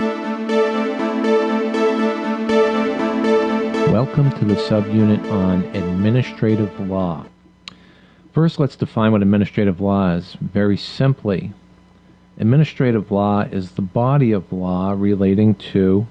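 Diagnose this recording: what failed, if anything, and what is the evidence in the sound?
Gain pumping runs through the whole recording, at the call-processing stage. The swing is around 5 dB. Loud and soft passages sit closer together than they should, and the sound feels squashed. The likely cause is input gain set far too high, with a fast limiter or compressor pulling it down on every peak.

A skip ahead occurs at 7.27 s. This is a network or jitter-buffer fault. Playback jumps forward with no gap and no fill. Something like 400 ms of audio never plays. The sound on either side of the jump is butted straight together. Later audio was already waiting, so the buffer dropped a stretch and moved on. That also cut the playout delay by roughly the same amount.

Jitter buffer speed-up follows from 7.37 s to 8.22 s, again at the buffer stage. The sound runs about 9% fast, at 109% speed. The pitch stays the same, but the passage sounds hurried. 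The buffer was holding more audio than its target. To shed the excess, the receiver cut many short pieces of one or a few pitch periods in a row. In total it removed around a tenth of a second.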